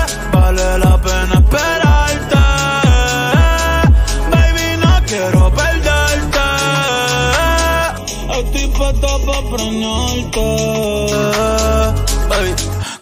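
From 7.98 s to 11.12 s the sound takes on a hollow, phasey character typical of channel delay (comb filtering). One channel lags the other by only a fraction of a millisecond, roughly 0.3 ms, and when the two are summed to mono the shared content cancels at regularly spaced frequencies. The first notch sits around 1.5 kHz, with further notches repeating up the spectrum.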